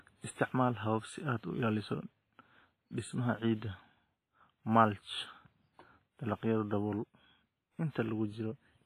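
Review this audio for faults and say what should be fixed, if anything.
The whole clip has heavy transform-codec damage, most likely from WMA compression. The speech sounds ringing and washy, with a hiss that swells and fades along with the sound, and nothing comes through above about 15.5 kHz. That fits a low bitrate around 24 kbps: each block's quantisation noise gets spread over tens of milliseconds, and the weaker spectral lines are thrown away entirely. To prevent it, encode at a much higher bitrate or use a lossless format.

There's one pre-echo from 7.91 to 7.95 s. A sharp attack lands late in a transform block, so the noise budget set for the loud part also fills the quiet stretch just before it. That produces a short hiss, about 42 ms, ahead of the attack, and the onset itself sounds softened and smeared. To prevent it, use an encoder with block switching or a higher bitrate so short transient blocks are available.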